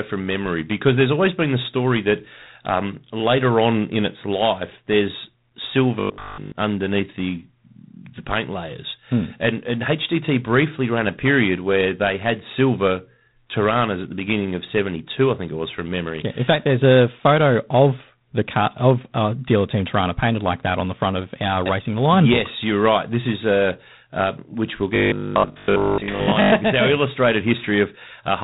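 The whole speech clip passes through G.726 ADPCM at 24 kbit/s. Nothing above 3.9 kHz survives. Each sample carries only a coarse prediction error, so a plainly audible, harsh rasping hiss rides on the speech and swells with its level.

From 6.00 to 6.54 s, just before "underneath the", the sound becomes a rigid metallic buzz at 50 Hz. It still roughly tracks the speech. This is robotic sound from repeated short buffers, likely a 20 ms block replayed over essentially the whole span. It returns from 24.96 to 26.54 s, right after "a uh which we'll", with most of that stretch repeated.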